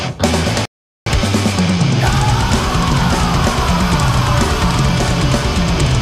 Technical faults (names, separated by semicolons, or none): playback stall